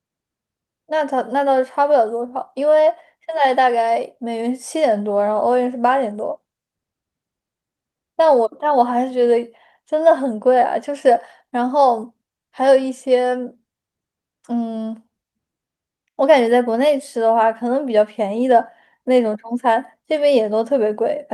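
Speech recording with no audible technical faults.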